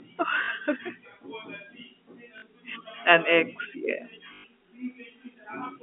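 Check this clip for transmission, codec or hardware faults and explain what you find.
One fault shows up: packet loss with the last packet repeated. It occurs three times, at 0.44 to 0.48 s, at 2.38 to 2.42 s, and at 4.34 to 4.44 s, just after "ex yeah". The first two gaps last 40 ms. The third lasts 100 ms. Audio went missing, and the receiver replayed the last good chunk until fresh audio arrived. The gap lengths fit 20 ms packets. The repeated chunks seldom line up with the pitch of the voice. The longer third gap buzzes at about 50 Hz, a brief robotic stutter. The narrow telephone band of the G.711 line is audible throughout.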